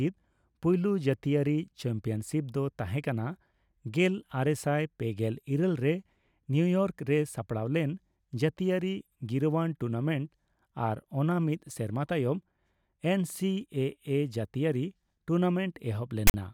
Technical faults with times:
16.27-16.34 file tags played as audio

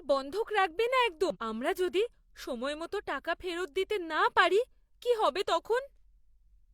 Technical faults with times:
1.30-1.37 damaged data in a compressed stream

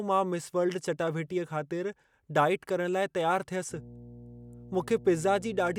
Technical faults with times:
3.69-5.78 mains hum

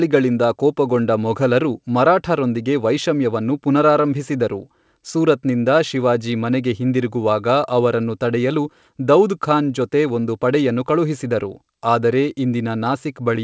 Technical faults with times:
none

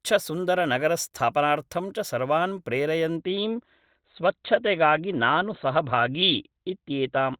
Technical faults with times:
3.17-7.40 adaptive stream at a lower bitrate

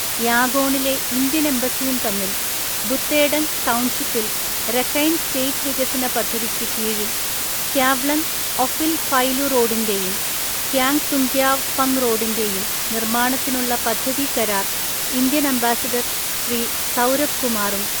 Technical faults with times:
0.00-18.00 low bit depth with dither

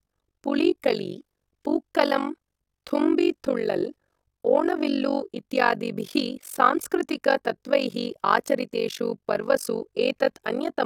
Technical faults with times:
0.00-10.86 overlap-add ripple

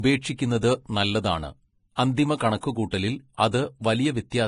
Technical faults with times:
0.00-4.48 Vorbis compression
0.61 pre-echo
1.95-1.98 pre-echo
2.60-2.63 pre-echo
2.91 pre-echo
3.51 pre-echo

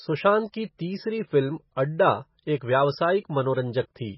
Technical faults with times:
0.00-4.17 MP3 compression

